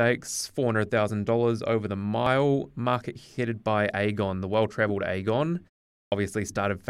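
At 6.06 s, a clipped start after a pause. A silence of about 0.45 s comes first. The output device drifts into sleep there and needs time to wake again. About 59 ms of speech is swallowed, up to 6.12 s, so it enters abruptly, missing its opening sound.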